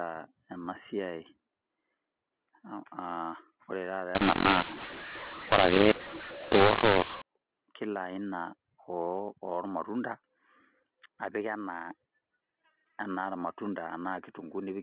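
From 4.15 s to 7.22 s, just after "ore taata", the telephone audio shows a mu-law and A-law mix-up: samples coded with mu-law are being decoded as A-law. The two logarithmic scales disagree, so levels are scrambled. Some peaks jump too loud, others shrink, and the quietest samples are pushed well above silence. The speech turns harsh and gritty, and gaps fill with hiss. Unlike simple clipping, the distortion also invades near-silent stretches. Around it, ordinary band-limited 8 kHz mu-law telephone sound holds.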